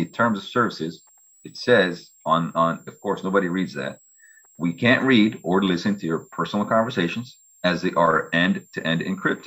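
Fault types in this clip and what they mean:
Switching supply whistle: A thin high whistle sits under the sound for the whole clip, wandering between about 7.3 and 7.8 kHz at roughly 35 dB below the programme. It comes from a switching power supply cycling at an audible rate.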